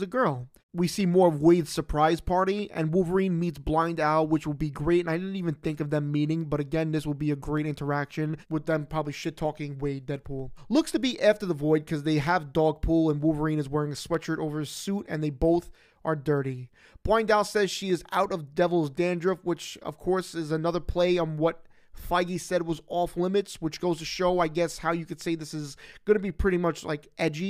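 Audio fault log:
1.01 to 27.28 s, clock drift buffer slips: A click recurs every 0.94 s, about thirty in all, as regular as a metronome while sound is present. The likely cause is two devices running on separate clocks that differ by around 200 ppm. The buffer between them slowly fills or drains. Each click fits a handful of samples being dropped or repeated to catch up. That sudden jump in the waveform is what you hear.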